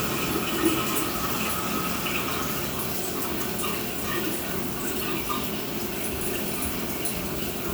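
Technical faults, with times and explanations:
No technical faults detected.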